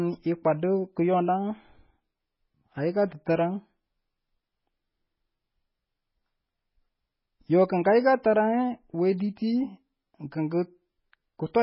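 From start to finish, the speech has nothing above about 5.5 kHz, which leaves it dull, and the weaker detail swirls in a watery way. Sibilants turn into metallic chirps, and consonant onsets smear. This is likely MP3 compression at a very low bitrate, perhaps around 16 kbps. With so few bits, the encoder drops the treble at a fixed cut-off and zeroes quiet frequency lines that flicker on and off between frames, which causes the heavy damage heard here.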